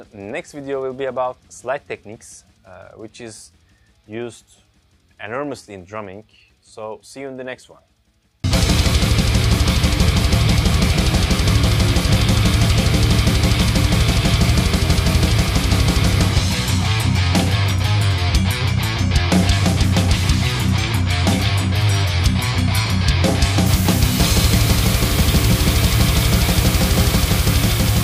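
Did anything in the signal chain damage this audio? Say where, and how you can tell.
Yes. The damage happens at sample-format conversion, where the audio suffers low bit depth with dither. From 23.66 s to the end at 28.03 s, a steady, even hiss appears. It sits only about 10 dB below the signal. There is no grit or harmonic distortion, just broadband noise. That pattern fits a requantisation to 4 bits. Dither was added before rounding, so the coarse rounding error became constant white noise rather than distortion.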